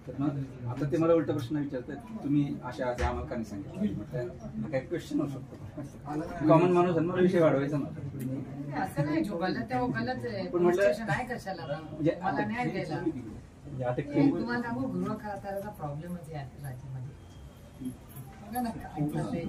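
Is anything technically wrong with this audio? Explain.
No, nothing technically wrong can be heard in this recording; the signal holds steady throughout with no audible defects.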